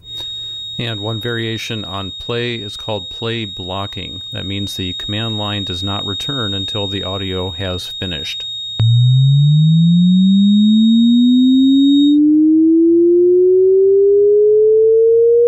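From the start to 12.2 s, a thin, steady whistle near 3.7 kHz wavers about 15 dB under the sound, a feedback whistle, likely from a speaker-microphone loop held just at the edge.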